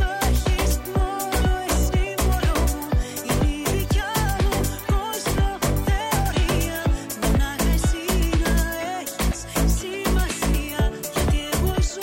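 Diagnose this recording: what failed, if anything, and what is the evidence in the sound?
Nothing stood out on listening to the recording, and I found no failure at any stage to diagnose.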